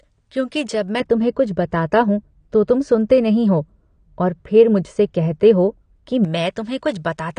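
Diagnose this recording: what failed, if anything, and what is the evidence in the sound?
The speech runs through the whole clip with nothing above 9.9 kHz. It sounds dull and smeared, with a fizzy, warbling texture on sibilants. The stage is the codec. The likely cause is AAC compression, consistent with AAC-LC at a low bitrate near 32 kbps, where the cut-off drops and the high bands are starved.

From 1.00 s to 6.25 s the treble falls away further. The response tilts smoothly downward, about 11 dB lower at 10 kHz than at 1 kHz. The sound turns muffled. This is de-emphasis applied wrongly in a processing stage: a treble cut was added to audio that had no pre-emphasis to undo, or was applied twice.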